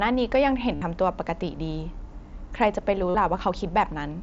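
At 0.75 s and again at 3.09 s there's concealed Bluetooth headset packet loss: runs of about 60 ms and 53 ms went missing between headset and phone, and the receiver filled each gap by repeating the last bit of waveform, so you get a brief buzzy held tone with a slight warble as the real speech comes back over the wideband mSBC link.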